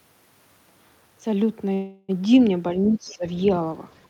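From 1.73 to 2.11 s the speech stalls in a call audio freeze. Rather than dropping out, the last sound is stretched into a fading buzz for about 352 ms, with no true silence, and then the speech resumes exactly where it left off. Nothing is lost, but everything after it arrives about 352 ms later. This is likely a jitter buffer running dry while packets were held up in transit.

From 2.88 to 3.25 s the speech is suppressed in double talk. The level dips by roughly 15 dB at its deepest, and the affected stretch totals around 0.4 s, so the speech sounds pulled back. The likely cause is an echo canceller that could not tell the near talker from loudspeaker echo while both sides spoke, and so attenuated the whole signal.

At 3.09 to 3.14 s, inside that dip, the other side's voice leaks through as a brief, faint scrap, roughly 30 dB below the main speech. It is short, audible only as a small foreign fragment. 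This is likely residual loudspeaker echo that the echo canceller failed to remove from the microphone path during the same double-talk moment.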